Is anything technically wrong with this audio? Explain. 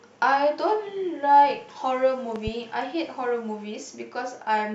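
Yes. There is a loud pop at 2.36 to 2.50 s. Two sharp pops come in quick succession, a few decibels louder than the speech. The speech carries on underneath without a break. The likely cause is a sudden voltage step or pulse entering the signal path, for example from a plug, a switch, static or a driver glitch. The circuits downstream shape that pulse, which gives it the sharp, thumping character heard here.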